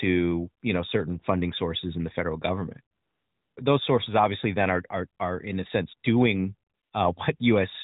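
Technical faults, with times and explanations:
2.96–3.56 s and 6.70–6.92 s, AMR comfort noise: the real background gives way to a steady, smooth hiss for 0.6 s and then 0.22 s, because the phone stopped sending speech frames and the receiver synthesised noise instead. Unlike a dropout, the gap is never silent, and its texture switches abruptly at each edge.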